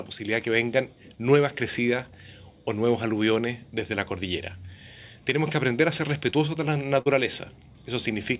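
Around 6.30 s and again at 7.02 s there's short concealed packet loss: a sliver of audio, roughly 20 ms and then 40 ms, never reached the decoder in time, so the receiver patched each gap by extending the preceding sound and easing back into the real signal. You hear a quick smear or wobble, the second about twice as long. It rides on a band-limited call path, nothing above 4 kHz, which fits G.711 mu-law.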